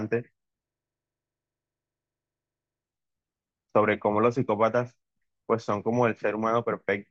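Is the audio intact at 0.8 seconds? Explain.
No. At 0.8 seconds the clip is inside a system hang loop running from 0.68 to 2.84 s. The computer or its audio driver stalled, and the sound hardware kept replaying the same 40 ms stretch of its ring buffer, about 54 times over. That exact repetition at 25 Hz replaces the speech with a rapid, mechanical stutter bordering on a coarse buzz, and the speech picks up again afterward with next to nothing missing.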